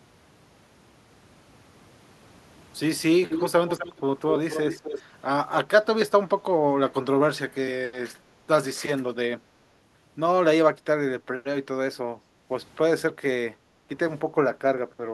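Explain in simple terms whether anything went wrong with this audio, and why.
Between 3.29 and 5.02 seconds (3.29–3.5, 3.67–4.0, 4.31–5.02), a copy of the speech returns about a quarter second late. This is an echo leak, likely from a loudspeaker's echo canceller missing some sound. Unlike reverb, it is a distinct delayed repeat.

At 12.18–12.49, 13.53–13.89 and 14.87–15.01 seconds, the room sound briefly dips and then comes back. This is background gated by the echo canceller: the sound isn't repeated, it is turned down for a moment.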